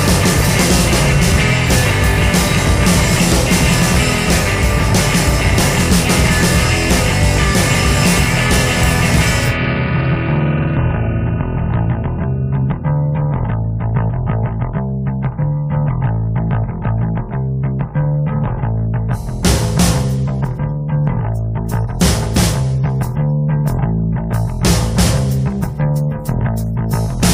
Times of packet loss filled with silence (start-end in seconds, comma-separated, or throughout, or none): none